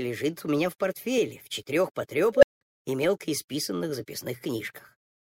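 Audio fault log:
2.35–2.61 s, unstable filter: a tone around 500 Hz swells to clipping within about 79 ms, then cuts out into roughly 186 ms of silence. A recursive filter has gone unstable. Its output grew without limit and overflowed. The sound stays silent until the filter resets.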